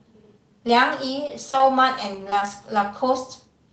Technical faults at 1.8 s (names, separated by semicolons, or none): repeated packet loss (robotic sound)